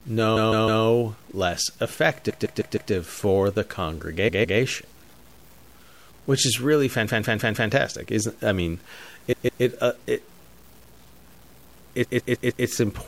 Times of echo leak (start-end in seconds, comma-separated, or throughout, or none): none